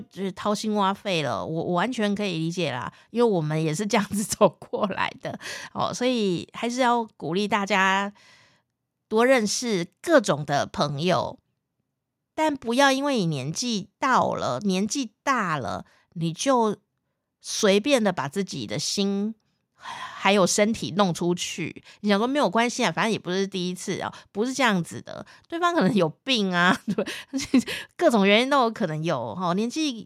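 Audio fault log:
No technical fault can be heard anywhere in this recording; the signal stays continuous and steady throughout.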